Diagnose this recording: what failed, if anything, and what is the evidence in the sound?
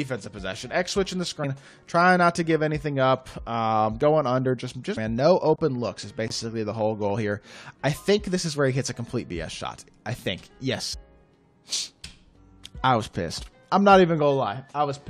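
Codec: damaged data in a compressed stream, heard as brief glitches at 1.43, 4.96, 10.93 and 11.72 s; misread frames where the decoder lost sync.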